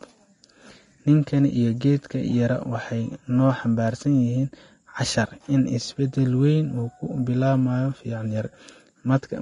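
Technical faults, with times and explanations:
Throughout, likely Vorbis compression, fitting about 32 kbps: coarsely quantised treble turns grainy and hissy; spectrogram shows noisy upper bands and nothing above 10.6 kHz.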